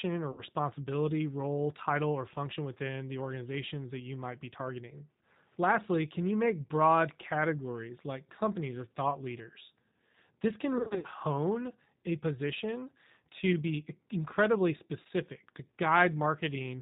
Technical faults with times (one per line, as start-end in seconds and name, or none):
0.00-16.81 G.729 codec
0.32-0.42 VoIP packet loss concealed by the speech codec
10.78-11.06 VoIP packet loss concealed by the speech codec
15.01-15.07 VoIP packet loss concealed by the speech codec